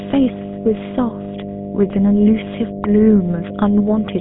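From the very start there's a steady 50 Hz mains hum sitting under everything, and it's loud, only a few decibels below the speech itself. That's the classic ground loop or nearby transformer leaking the power line into the signal, so you get a constant low drone that never lets up.

Running the whole way through as well, the speech has been squeezed through the GSM full-rate codec, and the damage is plainly audible. The band is cut to a phone line, roughly 150 Hz to 3.7 kHz, with nothing above 3.8 kHz, which fits the old 13 kbps full-rate scheme. Its coarse pulse-train excitation is what gives the voice that buzzy, gravelly roughness.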